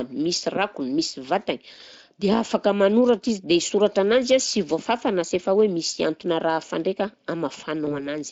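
At 7.85 s, VoIP packet loss concealment by the speech codec sets in. A 20 ms gap, fitting one lost packet, was filled by the Speex decoder from its last pitch and filter. The sound smears into a fading buzzy tone or coloured noise and stays weak until 8.08 s.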